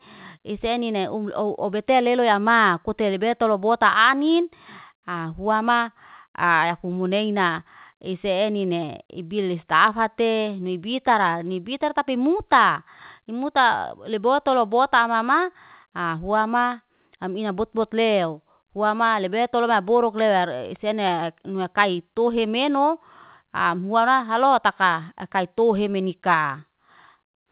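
No faults can be heard in the speech, which carries the narrowband sound of a telephone-style call path, with nothing above 4 kHz, consistent with G.711 mu-law coding at 64 kbps.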